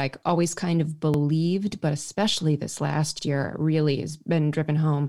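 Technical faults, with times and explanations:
1.14–1.19 s and 3.19–3.24 s: overlapping chunks. The speech was handled in blocks about 2 s long, and each new block began 50 ms before the previous one finished. That 50 ms of speech therefore plays twice at each join. It is heard as a brief stutter or click, once just after "always kind of", and again after "but especially this last", before "year really has". The two joins fall 2 s apart.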